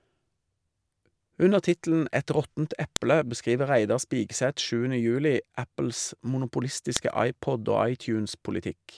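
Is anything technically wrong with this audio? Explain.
Yes. There are two sharp clicks, at 2.96 s and 6.97 s, four seconds apart. This is a file header played as audio. The speech was joined from 4-second pieces, and each piece's header bytes were decoded as samples. The result is a brief, loud snap at each join.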